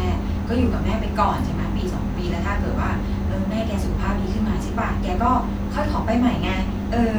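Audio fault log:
No technical faults can be heard anywhere in the recording; the speech signal stays continuous from beginning to end.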